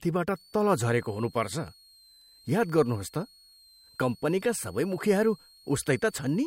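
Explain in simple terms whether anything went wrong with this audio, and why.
A faint, high-pitched whistle sits behind the speech from about 0.36 s right to the end of the clip, and its pitch wanders between roughly 4.1 and 4.5 kHz. This is a switching supply whistle. A switching power supply in the recording chain was running in a mode that repeats fast enough to hear, and the drifting pitch follows its changing load.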